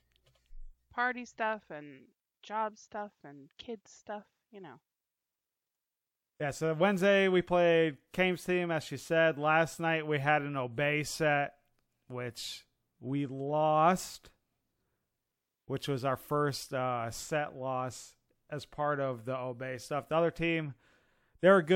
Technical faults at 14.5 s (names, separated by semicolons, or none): none